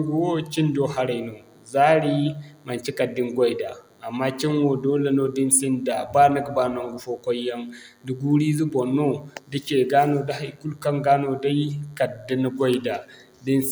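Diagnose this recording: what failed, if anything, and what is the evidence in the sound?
The analogue side picked up DECT cordless phone buzz: a thin, steady 100 Hz buzz with a stack of harmonics runs under the speech for the whole clip, faint and well below the talker. A nearby DECT handset or base bursts every 10 ms, and the audio circuitry rectifies those bursts.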